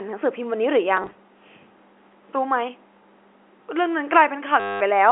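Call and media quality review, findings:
Choppy blips 0.97–1.15 s, then short robotic buzz 4.6–4.81 s, in speech. Packet loss with last packet repeated: about 80 ms lost in short bursts, then a 210 ms run, each gap filled by replaying the last packet. The run buzzes near 100 Hz, which fits 10 ms packets. Jitter buffer/network path. Band limited to 300–3400 Hz, consistent with G.711 A-law.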